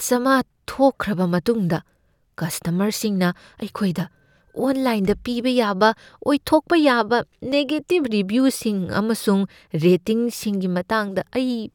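Audio missing between chunks, likely from a recorder working in 5-second blocks, drops a few milliseconds at 2.53 s and 7.52 s, leaving tiny butt-joined skips in the speech.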